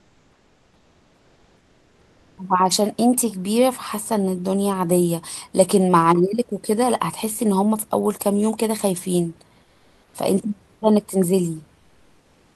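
Comfort noise in place of the background in this speech at 0.00–2.37 s, 9.63–10.13 s and 11.79–12.56 s. The pauses become steady, featureless noise about 2 to 3 dB quieter, likely from Opus DTX halting transmission.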